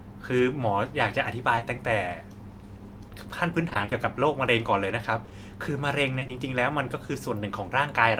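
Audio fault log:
Audio fault log:
1.55–1.63 s, short concealed packet loss: about 40 ms of speech, two back-to-back 20 ms pieces, never arrived and was filled by extending the preceding sound. The result is a single brief smear that blends back, not a sustained choppy stretch.
3.69–3.93 s, repeated packet loss (robotic sound): six gaps, none longer than 20 ms, together 120 ms, half of this quarter-second. Each patch continues the last sound before the next hole arrives, giving a choppy texture rather than one isolated blip.
5.25–5.33 s, short concealed packet loss: two consecutive 20 ms losses, about 40 ms in total, bridged by continuing the previous sound. It is heard as one momentary wobble, unlike the repeated robotic run.
6.19–6.31 s, short concealed packet loss: three adjacent 20 ms losses, about 60 ms filled by extrapolating the last sound. This is the longest single patch, but it is still one continuous fill rather than a series of gaps.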